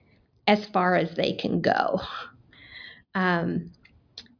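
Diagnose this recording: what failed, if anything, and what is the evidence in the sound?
Nothing failed here: listening across the whole speech recording, there's no point where the sound gives away a problem at any stage of the chain.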